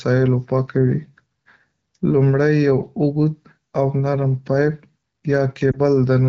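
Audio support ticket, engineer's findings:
Lost AMR speech frame at 5.72–5.80 s: radio-side bit errors failed a frame checksum, so the AMR-WB decoder concealed it by reusing the prior pitch and vocal-tract settings at reduced gain. Audible as a brief dip or warble, consistent with one dropped 20 ms frame.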